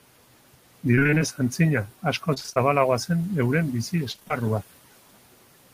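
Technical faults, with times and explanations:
Throughout, noise suppressor artifacts: the suppressor cuts the steady room noise by about 17 dB frame by frame, so the background pumps between phrases.
0.95–1.22 s, 2.34–2.58 s and 4.12–4.32 s, repeated packet loss (robotic sound): rapid runs of short dropouts, each under 35 ms, are patched by stretching the last sound. Roughly half of each span turns choppy.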